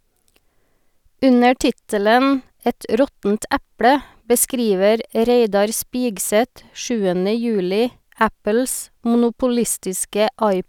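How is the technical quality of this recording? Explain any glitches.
Listening to the recording, nothing in its technical quality stood out as a glitch or problem.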